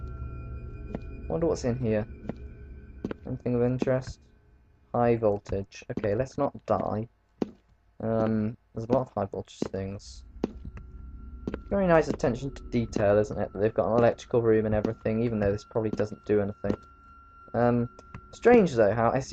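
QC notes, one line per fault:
11.70 s, compressed frames skipped: the audio jumps ahead about a tenth of a second, fitting roughly three 32 ms frames, with no silent gap as in a dropout.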